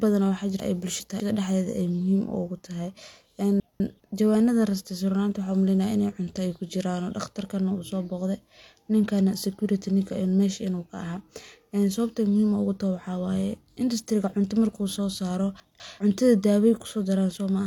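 Speech audio in which 200 ms chunks were delivered late and played out of sequence (chunks out of order) at 0.6–1.2 s, just before "dhaxeyd ay muhiim"; at 3.6–4.0 s; and at 15.6–16.0 s, just after "soo saaro". Each causes a jumbled moment at the hard joins.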